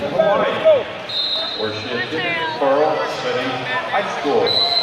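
No technical faults are audible.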